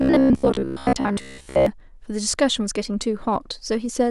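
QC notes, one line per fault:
0.02–1.66 s, robotic sound from repeated short buffers: rigid 66.7 Hz buzz, likely a 15 ms chunk looped through most of the span; waveform shows identical repeating cycles.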